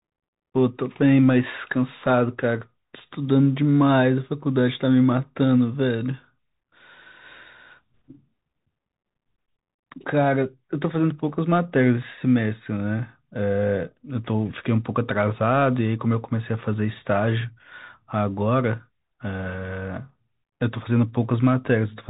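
Speech carried over a Bluetooth CVSD headset codec from start to finish, and the damage is plainly audible. The band stops around 4 kHz, giving the telephone-like thinness of that narrowband link, which fits a 64 kbps CVSD stream. Because the coder tracks the waveform one up-or-down bit at a time, fast, loud high-frequency energy outpaces its adapting step, so sibilants come out rough and scratchy over a grainy noise floor.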